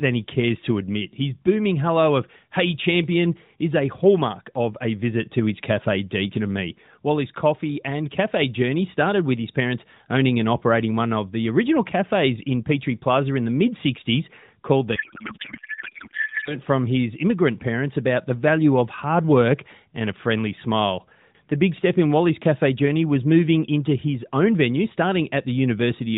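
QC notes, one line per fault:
14.96–16.56 s, codec payload misread: right after "called the", the speech drops out and is replaced by garbled, warbling noise that barely tracks the talker, lasting 1.6 s until "from his immigrant parents" returns cleanly. The underlying path is AMR narrowband at what sounds like 12.2 kbps, band-limited below 4 kHz with light coding texture. The fault is consistent with octet-aligned AMR payloads being unpacked as bandwidth-efficient, shifting every field so the decoder synthesises from misplaced parameters.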